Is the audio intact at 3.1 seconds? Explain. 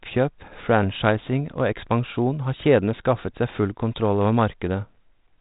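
Yes, the audio is intact at 3.1 seconds: the speech there carries only the 32 kbit/s G.726 ADPCM telephone coding, which keeps the band below about 3.8 kHz.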